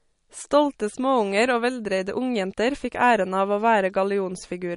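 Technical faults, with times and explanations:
Throughout, MP3 compression: the speech has a clearly watery, swirly quality, and there's nothing at all above 10.6 kHz, so the top end stops dead rather than rolling off. That hard ceiling plus the warbling in the quieter detail is likely an MP3 encoder running short of bits and sharply limiting the treble while flickering weak frequency lines on and off between frames. The damage points to a low bitrate, somewhere around 40 kbps.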